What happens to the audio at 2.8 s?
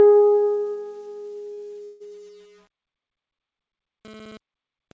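Nothing goes wrong at 2.8 s: the music plays through intact, carried by a call path whose G.722 coding leaves nothing above 8 kHz, as it does throughout.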